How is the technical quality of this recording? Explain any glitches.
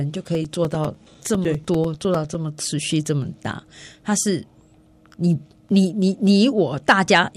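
The recording has one clear fault: periodic USB or driver dropouts. From 0.15 to 2.35 s, a background task stalls the audio path every 0.1 s. Each stall drops about 4 ms of sound, replaced by silence. The result is about twenty evenly spaced dropouts, heard as ticks wherever they fall on the speech.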